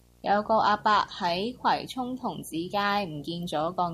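A screen or video cable is coupling into the audio path for the whole clip, producing video or display buzz: a rasping 59.94 Hz field-rate buzz with hash above it, plus a 15.7 kHz line-rate whine, sitting roughly 25 dB below the speech.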